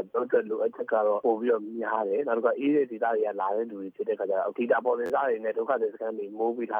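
At 5.06 to 5.10 s a repeated buffer occurs: new audio arrived late, so an 11.61 ms slice, which fits a 512-sample buffer, played three extra times with hard joins. Unlike a dropout's silence, this gives a brief buzz repeating at 86 Hz, and about 40 ms of audio is lost.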